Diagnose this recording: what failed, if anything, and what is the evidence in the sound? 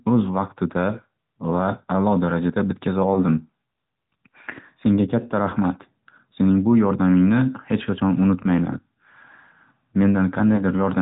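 AMR narrowband mobile codec, throughout the speech: the codec stage band-limits everything to below 4 kHz and rebuilds the voice from a vocal-tract model and a few excitation pulses. The plainly audible buzzy, synthetic edge fits AMR-NB's 10.2 kbps mode.

Lost AMR speech frames at 3.14–3.22 s, 5.50–5.53 s and 10.56–10.63 s: on the network or radio link, each brief dip or warble matches a single corrupted 20 ms frame. The decoder fills the gap by repeating the previous pitch and vocal-tract settings at reduced gain.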